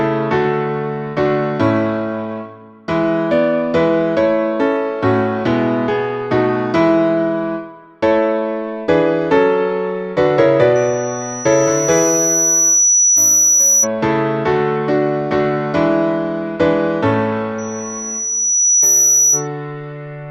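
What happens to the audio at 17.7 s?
A loudspeaker feedback squeal is under way, running from 17.58 s to 19.48 s. The microphone is picking up its own loudspeaker, and the loop gain tops one at 5.9 kHz. That tone swells over about a second and a half, ending roughly 5 dB above the sound.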